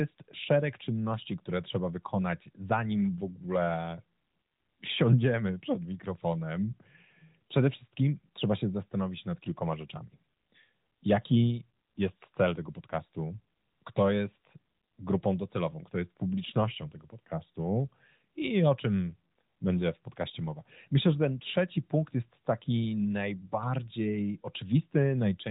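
No technical faults are present in the speech; it comes over a narrowband mobile path consistent with AMR-NB at 12.2 kbps, with nothing above 3.8 kHz and only light coding damage.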